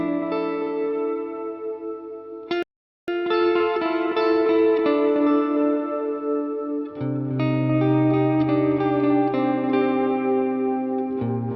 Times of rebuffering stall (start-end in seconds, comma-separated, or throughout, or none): 2.63-3.08